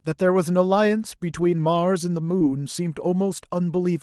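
At 2.39 to 2.42 s, short concealed packet loss: about 20 ms never reached the decoder, which extended the preceding sound over the gap, leaving a brief smear.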